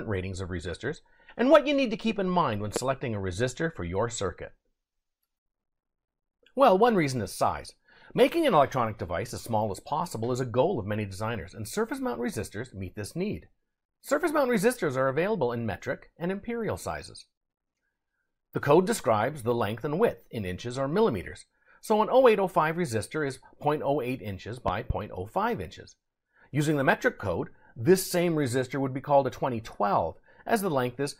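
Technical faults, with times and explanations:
2.76–2.79 s, loud pop: one sharp pop jumps well above the sound, which keeps going underneath. It's likely a quick voltage spike from a plug, switch or static discharge getting into the signal, with the following circuitry rounding it into a short, hard click.
24.68–24.93 s, loud pop: two pops in quick succession, peaking around 10 dB over the sound, again with the audio continuing beneath. Likely the same sort of electrical glitch, hitting twice.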